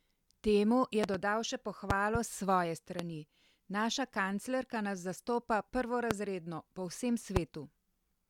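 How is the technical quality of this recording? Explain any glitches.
The recording is marred by five loud pops. Double pops land at 1.04 to 1.17 s and 1.90 to 2.18 s. Single pops hit at 2.99 to 3.02 s, 6.11 to 6.13 s and 7.36 to 7.39 s. Each jumps far above the speech, the one at 6.11 s the loudest. They are likely voltage spikes from a plug, switch or static. The speech continues beneath each thump.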